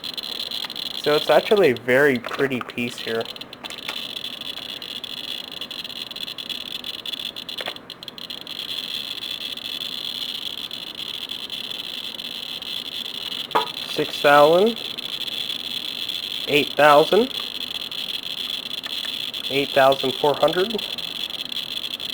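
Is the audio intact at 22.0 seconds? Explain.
No. Sample clock jitter runs throughout. An unstable converter clock mistimes samples by roughly ten microseconds, adding hiss about 20 dB below the sound, strongest on loud, bright passages.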